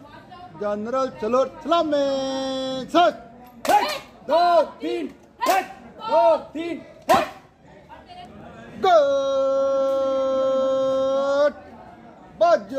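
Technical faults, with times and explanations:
No technical faults can be heard at any point in the recording.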